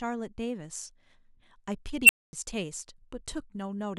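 At 2.04 s the speech is interrupted by an unstable filter. A recursive filter stage has been fed bad coefficients, so its output feeds back on itself and grows without bound. A tone near 3 kHz swells up over about 49 ms, hits clipping and turns into a harsh squeal. Then the values overflow and the output drops out. About 240 ms of silence follows, ending at 2.33 s when the filter resets.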